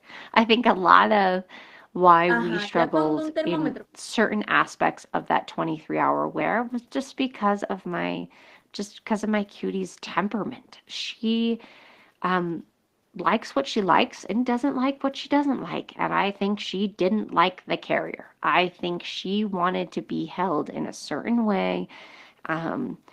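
No technical faults can be heard anywhere in this speech recording. At no point does anything in the audio stand out as a problem to point to.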